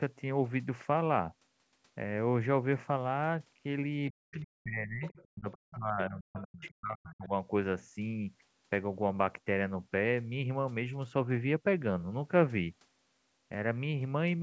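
From 4.11 to 5.03 s the speech dips and breaks up. This is speech suppressed in double talk. Both sides were likely talking at once. The echo canceller could not tell the talker from the loudspeaker echo, so it pulled everything down. Gaps add up to under a second. The deepest drop is about 40 dB.

At 5.05 to 5.26 s a faint second voice appears. This is the other side's voice leaking through. It sits about 25 dB below the talker. The likely cause is loudspeaker sound the canceller failed to remove from the microphone.

From 5.28 to 7.31 s the suppression returns, for about one and a half seconds in total. Again the level falls by about 40 dB at worst. This is likely the same double-talk clash.

Inside that stretch the leak flickers back four times: 5.51 to 5.55, 6.39 to 6.43, 6.61 to 6.74 and 7.09 to 7.15 s. Each scrap is short, and each likely comes from the same echo left behind by the canceller. 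The first three sit about 25 dB down. The last is louder, about 20 dB below the talker.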